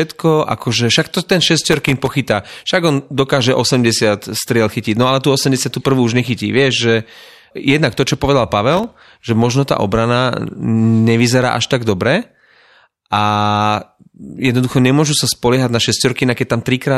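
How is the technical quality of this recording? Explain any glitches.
Two bursts of processor overload crackle mar the speech, one from 1.64 to 2.13 s and a shorter one from 8.72 to 9.03 s. In both, the processor fell behind and missed a run of its tiny audio buffers, each under a millisecond long, and every miss dropped to silence with hard edges. Strung together, those dozens of little dropouts sound like gritty, tearing crackle over the voice that clears once the load eases.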